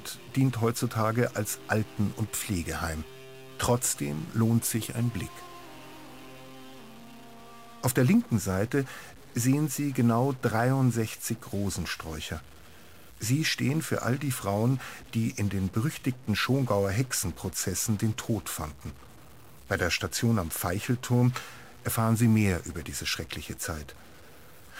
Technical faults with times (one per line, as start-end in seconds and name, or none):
0.00-24.80 stuck bit
3.81-3.84 DAB burbling